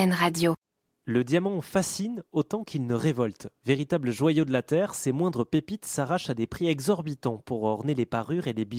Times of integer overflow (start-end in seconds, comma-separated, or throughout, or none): none